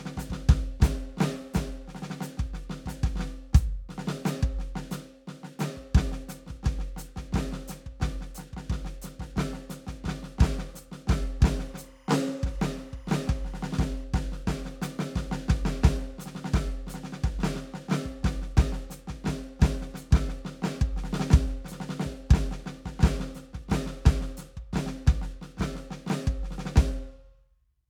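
From 11.48 to 14.04 s there's timecode bleed under the music: a faint warble flipping between about 1 and 2 kHz, around 35 dB down, likely leaking from 25 fps code.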